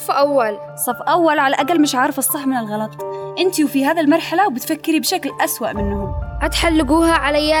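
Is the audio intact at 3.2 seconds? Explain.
Yes, the audio is intact at 3.2 seconds, with no dropout, click, distortion or other fault at that moment.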